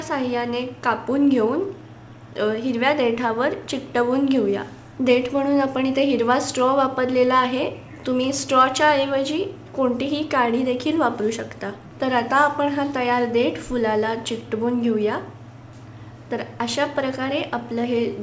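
Nothing here goes wrong: the audio has come over a call connection, and the lack of anything above 8 kHz points to a wideband call codec such as G.722, with its usual coding noise, but no dropouts, glitches or other faults turn up anywhere in it.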